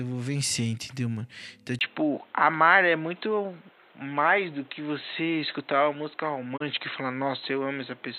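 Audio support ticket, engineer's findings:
Input switched to a poorer device, 1.79 s to end: brief gap of about 20 ms, then band-limited, boxy speech with nothing above 4.1 kHz, level shift of roughly 5 dB and new noise floor roughly 30 dB down. Likely capture device or headset call-profile change.

Digital broadcast dropout, 6.56 to 6.62 s: quick fade over 20 ms to a 24 ms mute, then recovery. Receiver muting on a corrupt or missing frame, consistent with a single lost frame. Audio in the gap unrecoverable.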